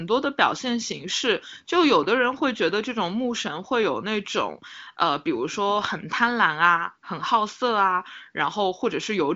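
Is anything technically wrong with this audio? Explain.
No, nothing is technically wrong with this audio.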